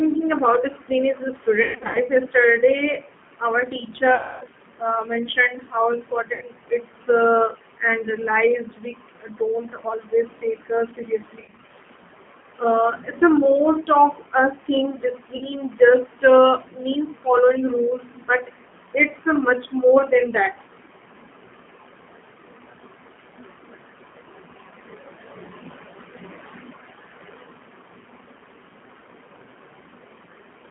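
The whole recording sounds boxed-in and slightly rough and synthetic, with nothing above about 3.4 kHz and little below 150 Hz. That is the G.729 codec, here in its G.729A form at 8 kbit/s. It does not carry the waveform itself. It resynthesises speech from a vocal tract filter, a pitch predictor and a few pulses per 10 ms frame, and on this clip that coarse rebuilding is plainly audible.

At 1.63 to 1.99 s, right after "about discipline is a", the voice smears into a buzzy, stretched tone that sags and breaks up. This is VoIP packet loss concealed by the speech codec. About 260 ms went missing, scattered over 320 ms, with the longest gap 120 ms. The decoder filled each hole by repeating its last pitch and filter at falling gain. The same happens at 4.15 to 4.43 s, just before "uh mentioned how", again covering about 260 ms. A shorter 80 ms patch follows at 6.33 to 6.44 s. At 11.40 to 11.68 s, 140 ms of losses in runs of up to 40 ms give a choppy stretch. 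At 15.37 to 15.47 s, between "us think" and "just uh means following", a 40 ms gap leaves a brief buzz, and the voice stays slightly weak as the decoder recovers.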